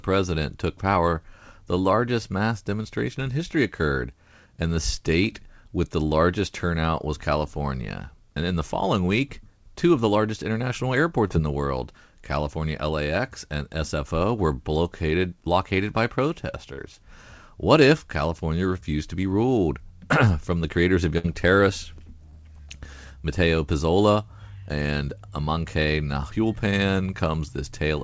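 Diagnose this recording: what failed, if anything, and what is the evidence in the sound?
Short concealed packet loss on the network side, at 11.28 to 11.32 s after "of the largest international", 16.74 to 16.80 s, and 22.30 to 22.43 s. The decoder extended the preceding sound, which shows on a spectrogram as a brief smear within a band ending at 8 kHz, consistent with a G.722 call path.

Burst of packet loss at 21.18 to 21.26 s, after "the creators of". About 60 ms went missing and was bridged by a continuation of the last sound that faded out before the speech resumes.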